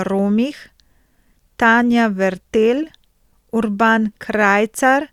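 A speech recording with nothing technically wrong that can be heard.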